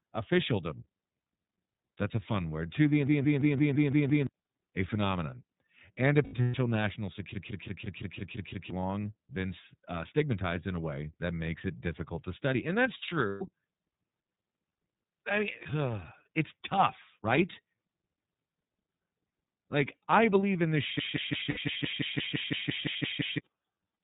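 Speech recorded through the iLBC codec carries plainly audible coding damage throughout. Nothing above 4 kHz survives, and the voice has a rough, slightly synthetic texture, which fits the 13.33 kbps mode with 30 ms frames, each frame's excitation coded independently. A system hang loop occurs three times: 3.07 to 4.27 s, 7.34 to 8.70 s and 20.99 to 23.38 s. Each time, one 170.67 ms segment repeats exactly at 5.86 Hz, giving a machine-gun stutter of 7, 8 and 14 repeats. The pattern fits playback hardware cycling an 8192-sample ring buffer while the host stalled, and the passes replace about 1, 1.5 and 2 s of audio. Lost iLBC frames appear as brief held, buzzy vowel-like fills where the decoder repeats the last pitch cycle with added noise. They occur at 6.24 to 6.55 s (210 ms scattered over 300 ms, longest run about 100 ms), 13.29 to 13.42 s (120 ms), 15.62 to 15.67 s (30 ms), and 21.50 to 21.58 s (60 ms, inside the third loop). 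Each loss clears almost immediately because the frames stand alone.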